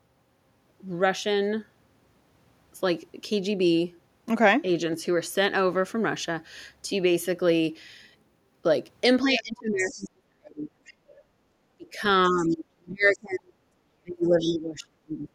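From 9.25 to 10.73 s, speech is suppressed in double talk. The level dips by about 35 dB. The echo canceller likely mistook overlapping talk for its own echo. From 9.77 to 10.04 s, the other side's voice leaks through, faint, likely residual loudspeaker echo. It returns from 10.85 to 11.15 s, quieter still. Speech is suppressed again from 11.77 to 13.6 s, with another faint leak from 12.42 to 12.56 s. A last suppression, about 30 dB deep, starts at 14.03 s and runs to the end. Within it, the leak from 14.4 to 14.58 s is loudest, roughly 15 dB below the speech.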